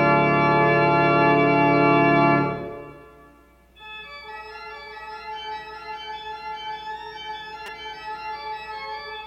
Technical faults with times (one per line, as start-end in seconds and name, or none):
7.66 repeated buffer